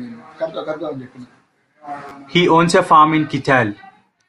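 At 2.09 to 2.11 s there's a repeated buffer: fresh audio arrived late, so a 10 ms chunk played twice more, giving a brief buzzy stutter and dropping around 20 ms of speech.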